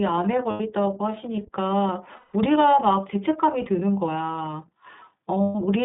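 Speech carried over the iLBC codec for its full length. The line is limited to roughly 150 Hz to 3.6 kHz, and the voice has a clearly audible rough, slightly synthetic texture. Both traits fit iLBC's 30 ms frame mode at 13.33 kbps. Lost iLBC frames cause three dropouts, at 0.50–0.61 s, 2.16–2.34 s and 5.43–5.55 s. In each, the decoder fills the gap by repeating the last pitch cycle with added noise, so it sounds like a held, buzzy vowel. The lengths point to about three, six and four missing 30 ms frames. Since each frame decodes independently, the voice recovers immediately afterwards.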